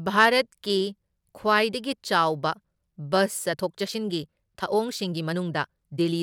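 At 3.48 s the speech suddenly gets faster, and it stays that way to the end. This is a time-stretched section. The pace jumps to about 1.43 times normal, yet the pitch does not rise. The voice sounds rushed. Software was likely used to squeeze this part to fit a shorter length. It kept the pitch steady by cutting out short pieces of the audio.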